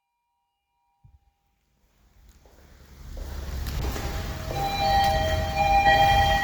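After the smooth fade-in settles around 3.68 s, a call bitrate drop hits at 3.81 s and lasts to the end; the audio turns coarse and muffled, which fits roughly 64 falling to 23 kbps.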